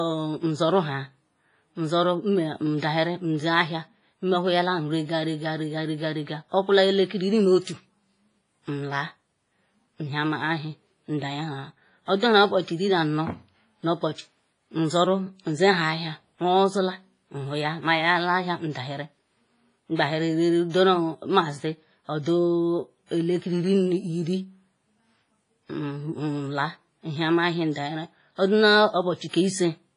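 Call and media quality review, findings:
WMA compression, likely cause: ringing, washy speech, hiss swelling and fading with level, throughout. Nothing above 10.5 kHz, a hard ceiling on the spectrogram, with gappy high bands where weak components are zeroed. Heavy damage, consistent with about 24 kbps.

Pre-echo at 7.62 s (49 ms) and 29.29 s (45 ms): short hiss before sharp onsets, attacks softened. Transform block spreads noise meant for the loud onset into the quiet lead-in. Waveform shows low fuzz ahead of each transient.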